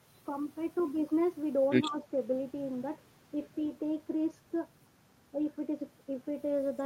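From 1.89 to 2.05 s, the speech briefly dips a few decibels. This is likely speech suppressed in double talk, an echo canceller turning down overlapping talk.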